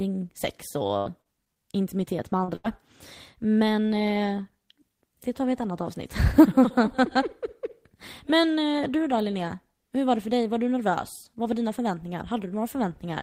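Speech with three packet-loss faults, all from audio arriving at the decoder too late or not at all. From 0.87 to 1.59 s, just before "intimitet med", repeated packet loss gives a choppy, robotic texture: five separate gaps, the longest about 80 ms, are each patched by extending the preceding sound, so nearly a quarter of that stretch is synthetic. The repetition is what separates it from a single dropout. Right after "intimitet med", at 2.44 to 2.51 s, a short concealed packet loss leaves only a brief smear, because about 40 ms was bridged and blended back smoothly, with no audible break. Then, at 2.56 to 2.67 s, a burst of packet loss holds the last sound for about 80 ms and fades it before playback resumes further along, skipping about 40 ms. This fading hold over a longer gap, with the timing jumping by 43 ms, marks it as a burst rather than the brief smear just before it.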